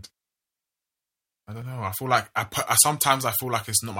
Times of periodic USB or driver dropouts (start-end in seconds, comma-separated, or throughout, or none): 1.62-3.61